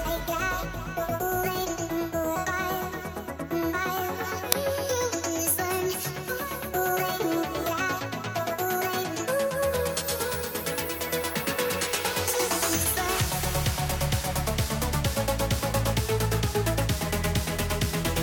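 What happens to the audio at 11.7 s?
Nothing goes wrong at 11.7 s; the audio plays through that moment intact, with no dropout, click or other fault.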